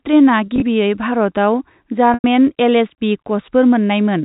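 Packet loss with pitch repetition at 0.46 to 0.62 s and 2.14 to 2.24 s in this telephone-band speech: the receiver repeats the last pitch period to fill gaps. The first event's brief scattered losses sound like buzzy holds. The second's 100 ms gap fades toward silence, then cross-fades back.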